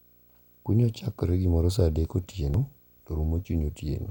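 A low buzz sits under the speech from start to finish, pitched at 59.94 Hz with a gritty hash layered over it and a faint, piercing whine up at 15.7 kHz, all well below the speech level. This is video or display buzz: a screen or video cable has coupled into the audio path, so the picture's field rate comes through as the buzz and the horizontal line scanning shows up as that very high tone.

At 2.54 s, right after "chakore gimoro sa adek", there is a tiny blip lasting only a few milliseconds. That points to damaged data in a compressed stream: a short stretch of the encoded file was corrupted, the decoder misread the affected frame and lost its place, and it searched for the next valid frame header before carrying on.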